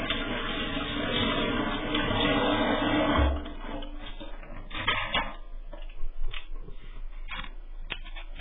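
From start to finish the sound is dull and smeared. Nothing survives above 3.7 kHz. Sustained parts warble and fizz. The likely cause is heavy AAC compression, which fits a very low bitrate near 8 kbps.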